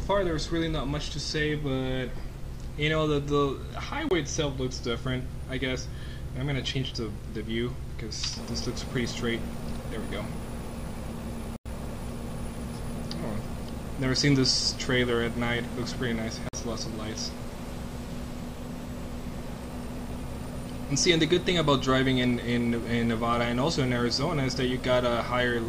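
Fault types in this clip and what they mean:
Block of digital silence: The sound drops abruptly to silence and returns with no fade. It happens three times, at 4.09, 11.56 and 16.49 s, lasting 23, 93 and 46 ms. Those lengths fit 1024-, 4096- and 2048-sample blocks.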